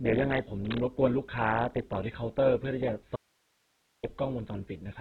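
Opus compression runs through the whole speech clip, likely at a very low bitrate around 8 kbps. Nothing is heard above 4.2 kHz, giving a narrowband, muffled sound, and the music-style coding leaves the speech grainy and rough where the encoder has filled starved bands with noise.

Cable scratch noise occurs from 0.65 to 0.81 s: a burst of dense, uneven rustling nearly as loud as the speech. This is likely from a worn cable or connector being moved, its contact resistance fluctuating rapidly and scratching across the signal.

An audio dropout to a faint residue runs from 3.16 to 4.03 s. The speech cuts out abruptly for 0.87 s, leaving only hiss far below normal level, then returns mid-flow. The likely cause is a break upstream while the downstream path stayed live.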